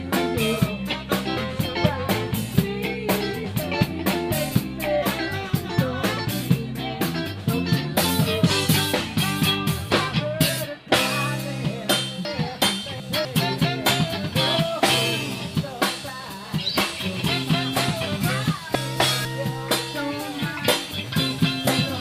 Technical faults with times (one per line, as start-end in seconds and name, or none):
12.25-13.25 chunks out of order
18.75-19.25 chunks out of order